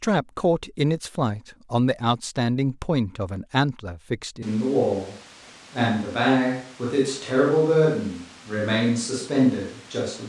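At 4.43 s the speech abruptly turns roomy and hollow, losing bass, and stays that way to the end of the clip. The overall level barely changes, but a layer of room noise becomes audible, sitting around 25 dB below the speech. This is a switch to a distant microphone, likely because the close microphone's signal dropped out and the recording fell back to one placed further away, which picks up more reflections and ambience.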